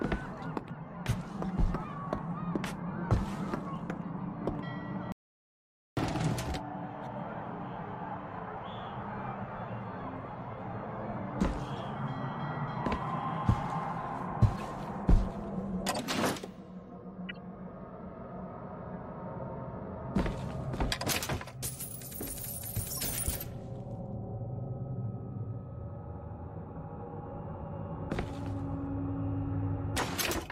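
An audio dropout to silence runs from 5.12 to 5.97 s, about 0.85 s in which the signal falls silent with no room tone. The audio stops abruptly and resumes mid-flow, likely because the input was lost and the recorder kept writing silence.

A corrupt frame decoded appears at 14.59 to 14.61 s and 17.29 to 17.31 s, each spanning a couple of frames, and more broadly at 22.88 to 23.03 s across several frames. Damaged bitstream data put energy at wrong frequencies, heard as short chirps or noise bursts peaking around -30, -25 and -20 dBFS respectively.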